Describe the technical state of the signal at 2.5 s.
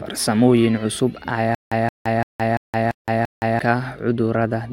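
At 2.5 s the speech is caught in a stutter with silent gaps, running from 1.55 to 3.59 s. The same 173 ms burst plays, then about 168 ms of digital silence follows. The cycle repeats every 341 ms, six times in all. The cause is likely a stalled player or stream that replays its last fragment at each retry and then runs empty. The speech that belonged in this span is lost.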